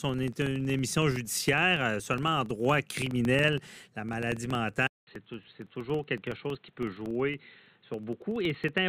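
From the first moment to the last there's a low, gritty buzz riding under the speech at about 21.5 Hz. That's the filter restarted on every block: the filter throws away its memory at each block boundary and starts again from silence, so every block opens with a tiny transient. The rate fits a 2048-sample block, and since each tick scales with the signal, the buzz swells on louder syllables and sinks in quieter stretches.

Then at 4.87 s the sound drops out for about 200 ms and comes back duller and more boxed-in, staying that way to the end. The level sits a few dB lower, and a faint new noise floor appears well below the speech. That's most likely the input switched to a poorer device mid-recording, a narrower-band microphone or headset path with its own tone and hiss.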